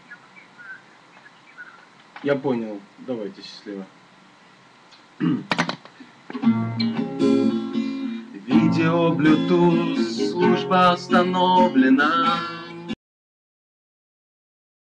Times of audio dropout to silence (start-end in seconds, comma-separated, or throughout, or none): 12.94-14.99